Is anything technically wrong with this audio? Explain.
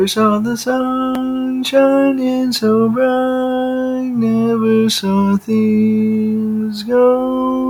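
Yes. A noise suppressor designed for speech was applied to music or sounds, and it runs throughout the clip. It treats steady tones, ambience and decay as noise, so sustained material and tails are pulled down while attacks pass. Gain swings of around 10 dB make the sound pump and thin.

There are also two stretches of sound cut by the noise suppressor: 1.11 to 1.64 s, dipping by about 4 dB, and 3.91 to 4.17 s, dipping by about 5 dB. Here the suppressor judged the held or fading content as noise, so it sinks audibly and its decay is shortened.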